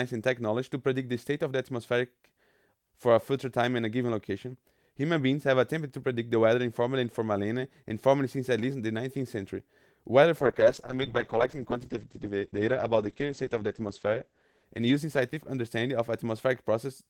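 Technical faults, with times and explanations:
10.43–16.03 s, call bitrate drop: the connection's bandwidth estimate collapsed, so the encoder was forced onto a far smaller bit budget, with the coarseness pointing to a fall from around 48 kbps to around 9 kbps. With so few bits the speech is coded roughly and turns watery, and the audio bandwidth shrinks from 20 kHz to 8 kHz, which muffles the top end. The worst stretch lasts about 3.5 s before quality recovers.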